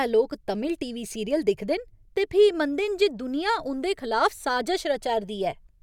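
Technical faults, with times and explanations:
No technical faults heard.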